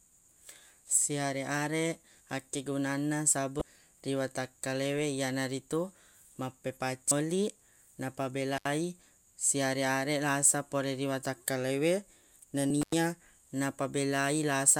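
Damaged data in a compressed stream at 3.58 to 3.62 s, just before "ri watakkalewe": corrupted frames make the decoder lose sync and hunt for the next header, giving a brief glitch. Again at 7.08 to 7.12 s. Intermittent contact at 8.57 to 8.65 s: a loose connection opens for 74 ms, cutting the speech with crackle at both edges. Damaged data recurs at 12.67 to 12.71 s, then intermittent contact at 12.82 to 12.94 s with a 93 ms dropout.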